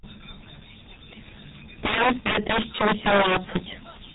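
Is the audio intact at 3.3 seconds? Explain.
No. At 3.3 s the speech sits inside an integer overflow that runs from 1.83 to 3.56 s. The signal is being pushed about 15 dB past the largest value the integer format can hold, and instead of being limited, every sample over that ceiling wraps around to the opposite extreme. Each loud peak therefore jumps across the full range, producing harsh, violent cracks that are far sharper and more broken than ordinary clipping.

Underneath that, the G.723.1 codec damage present across the whole clip also applies at this moment, and it is heavy. Nothing above 3.8 kHz survives, so the speech is muffled and dull. The low rate, which fits about 6.3 kbit/s, and the 30 ms frames with a slowly updated voice model make the speech sound hoarse, and consonants smear into one another instead of starting cleanly.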